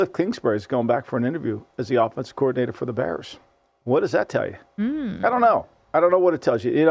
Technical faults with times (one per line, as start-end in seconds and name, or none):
none